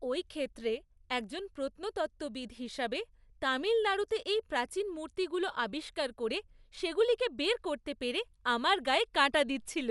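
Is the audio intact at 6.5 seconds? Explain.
No. At 6.5 seconds, as throughout the speech, the sound carries Dolby Digital compression damage, likely from an AC-3 style encoder squeezed to a low rate, which fits roughly 64 kbps. With so few bits, the encoder cuts the band so nothing remains above 11.4 kHz, and it leaves many frequency lines without detail, which the decoder fills with noise. The result is plainly audible: a dull, muffled top and a rough, fluttering grain around voiced tones.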